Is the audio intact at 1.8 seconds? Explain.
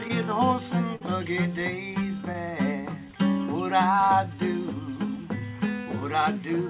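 No. At 1.8 s the audio sits inside a stretch of repeated timing corrections running from 0.34 s to 6.34 s. The receiver keeps inserting short repeated pieces to stay in step, playing the material at about 98% speed and adding roughly 150 ms across the span. It sounds like faint hiccups and a slightly dragging, uneven tempo. On a waveform, small duplicated segments appear at irregular spacing. On a spectrogram, brief smeared or doubled slices interrupt otherwise continuous bands.

The cause is clock drift between sender and receiver, present throughout the clip. The sender's audio clock runs a few percent slow, so the jitter buffer keeps draining and must be padded repeatedly. All the edits go the same way, lengthening the audio. On a spectrogram the content looks subtly stretched, with tiny seams at uneven intervals. The call path's cutoff near 4 kHz appears above them as an empty band.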